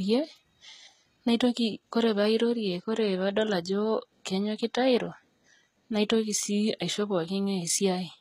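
Throughout the speech, the treble sounds bright but synthetic, and s sounds come out gritty and metallic, with nothing above 14.9 kHz. This is likely HE-AAC compression at a low rate near 20 kbps, rebuilding the top band from copied lower bands.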